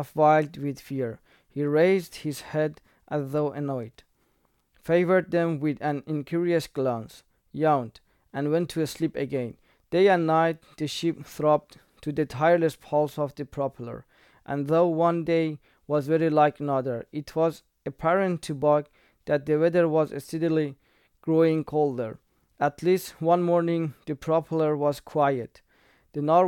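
Nothing in the speech stood out as a technical fault on listening.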